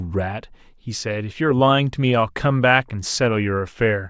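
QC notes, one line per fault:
No faults heard on this speech clip.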